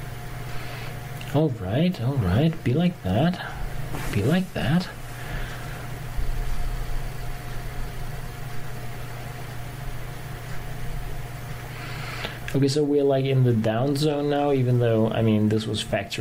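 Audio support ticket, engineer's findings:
No faults found on listening. Nothing in the audio calls for a fix on this ticket.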